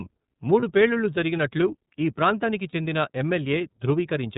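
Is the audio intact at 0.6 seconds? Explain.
No. Lost iLBC frames leave a gap from 0.60 to 0.64 s, which fits one missing 30 ms frame. The decoder fills it by repeating the last pitch cycle mixed with noise, so it sounds like a brief buzzy, held vowel. The voice recovers at once on "పేలుళ్లు జరిగినట్లు ఈ ప్రాంతానికి". Underneath, the iLBC codec, at about 13.33 kbps, cuts everything above 4 kHz and makes the speech a little rough and synthetic, with plainly audible damage.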